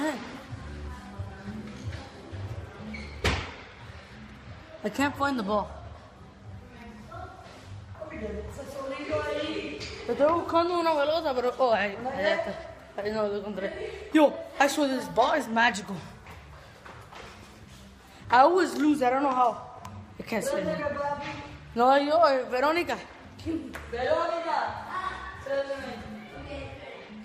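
Nothing here stands out as a technical fault; the audio simply runs along without any glitch worth pointing to.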